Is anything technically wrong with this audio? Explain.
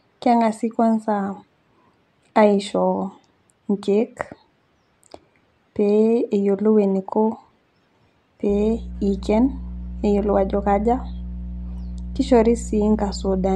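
Yes, there's mains hum in this speech clip. From about 8.49 s to the end at 13.56 s, a steady 60 Hz tone sits under the speech, roughly 10 dB below it. The power line is leaking into the signal path, through a ground loop or a transformer sitting too close to the gear. It comes across as a constant low drone that doesn't follow the speech at all.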